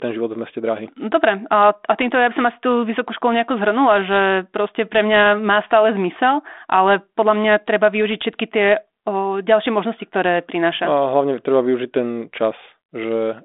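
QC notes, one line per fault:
Nothing stood out on listening to this speech, which comes across as ordinary telephone-band audio through a 32 kbit/s G.726 ADPCM link.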